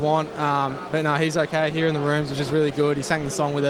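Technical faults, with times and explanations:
1.36 s to the end, call bitrate drop: the sound coarsens and turns rough for the rest of the clip, which fits the encoder being pushed from 32 kbps down to about 17 kbps and sitting at its lowest for roughly 1.19 s, so detail gets coded crudely.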